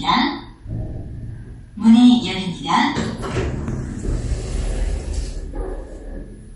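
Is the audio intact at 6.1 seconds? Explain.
No. At 6.1 seconds, as throughout the clip, the sound is dull and watery, with a swirling, chirpy texture and softened attacks, and nothing is heard above 11.1 kHz. This is likely MP3 compression at a low bitrate, around 48 kbps. Short of bits, the encoder cuts all treble above a fixed frequency and drops quieter frequency components that flicker on and off between frames. That flicker causes the swirl, and the damage is plainly audible.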